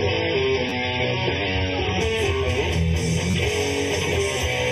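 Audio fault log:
throughout: channel delay (comb filtering). One channel arrives a fraction of a millisecond behind the other, around 0.4 ms, and the two are summed to mono. Content shared by both cancels at evenly spaced frequencies. The first notch sits near 1.5 kHz, with further notches repeating above it. Those fixed gaps in the spectrum give the sound a hollow, phasey colour that never changes. Nothing else shifts it, so it stays the same across the whole clip.
0.0 to 2.0 s: adaptive stream starting at a low bitrate. Playback opens on a thin version of the stream, consistent with MP3 at 24 kbit/s, and nothing is heard above about 5.9 kHz. The treble is missing and coding artefacts are more obvious. At 2.0 s the player moves up to a stream that fits 128 kbit/s MP3. The top end returns suddenly with no gap. The player had been starting fast on a cheap stream until it measured the connection.
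0.69 s and 3.31 s: repeated buffer. New audio arrived late, so the device replayed its last buffer. At 0.69 s the same piece plays twice more, and at 3.31 s three more times. Each piece lasts about 11 ms, which fits a 512-sample buffer. Repeats that short fuse into a brief buzz with hard joins rather than a clear stutter. Roughly 20 ms and then 30 ms of real audio are lost.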